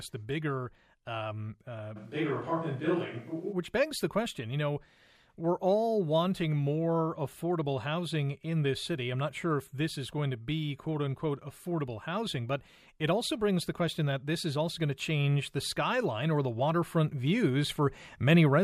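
Right after "the bigger um uh", at about 1.98 s, the sound abruptly turns roomy and hollow and loses its low end, then snaps back just before "begs the question you" at 3.51 s. That's a switch to a distant microphone, likely the close mic's signal dropping out so a farther one, such as a camera mic, carries the speech. The level barely shifts, and the room noise stays well below the speech.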